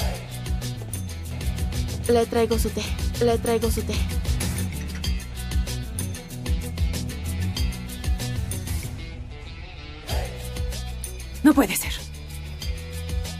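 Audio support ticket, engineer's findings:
Doubled audio track, 1.31–4.67 s: sound repeats about one second behind itself at roughly equal level, full-band, dry, no decay; copy cuts in and out abruptly. Likely a second capture via a slower path, or an edit holding two offset copies.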